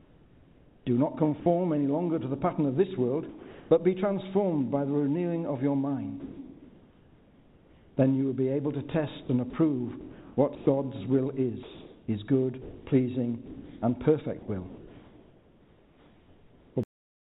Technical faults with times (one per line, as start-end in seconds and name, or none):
0.00-1.46 comfort noise in place of the background
1.40-1.46 sound dropped by the voice detector
3.29-3.71 sound dropped by the voice detector
6.20-7.97 comfort noise in place of the background
9.23-10.67 sound chopped by the voice detector
11.63-14.48 sound chopped by the voice detector
16.83-17.23 cut-off end